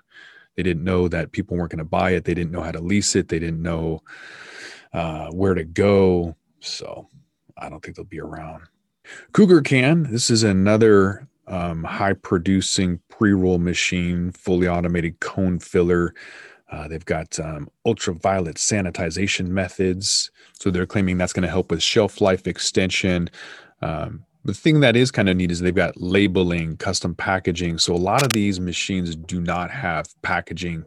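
Speech with cable scratch noise at 28.18–28.35 s: a dense, uneven scratching burst about 5 dB below the speech, likely from a worn cable or connector being moved, unlike a single sharp click.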